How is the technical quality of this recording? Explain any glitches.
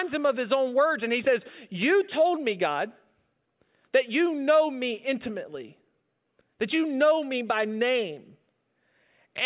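No technical faults can be heard in this recording.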